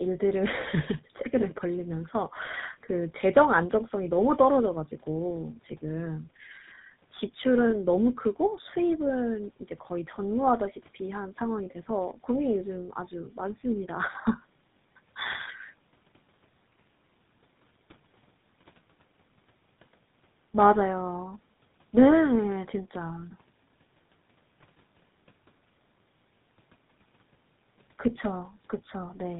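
It's a speech recording with tandem speech coding all the way through. It sounds like it passed through an AMR-type mobile coder and then a GSM full-rate coder, with each re-encoding the previous one's damage. That leaves it rough and warbly, with nothing above about 3.8 kHz.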